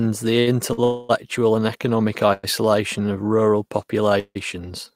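At 0.39 to 0.49 s and again at 0.73 to 0.80 s the speech hangs on one sound for 75 ms and then 48 ms. These are short stalls from a late packet. The jitter buffer ran dry, so the receiver stretched the last sound until the packet arrived and then resumed without losing anything. Each stall sounds like a held syllable with a slight buzz or dip. On a spectrogram the harmonics run flat and unchanging, and the waveform shows near-identical repeating cycles.

Longer versions follow at 0.84 to 1.11 s (255 ms), 2.33 to 2.45 s (102 ms) and 4.19 to 4.37 s (159 ms). Each is a call audio freeze, likely caused by packets held up in transit. The last sound is drawn out into a fading buzz or hiss, and at 4.19 s it ends in about 60 ms of silence before the speech resumes later than it should. The spectrogram shows smeared horizontal bands that thin out, and the waveform envelope decays, dropping to flat at 4.19 s.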